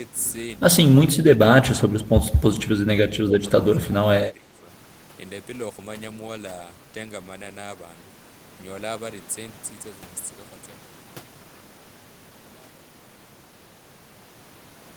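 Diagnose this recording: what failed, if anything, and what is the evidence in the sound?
The speech dips in level, by roughly 10 to 15 dB, at 1.11–1.39, 1.57–1.85, 2.03–2.13, 3.24–3.43, 3.64–3.97 and 4.22–4.68 s, the longest near 4.2 s. This is likely speech suppressed in double talk at the call-processing stage, where an echo canceller mistook the talker for far-end echo and attenuated it.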